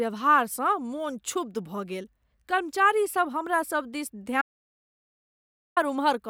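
At 4.42 s the speech cuts to dead silence, with no room tone, until 5.77 s: an audio dropout to silence, likely from a lost input link.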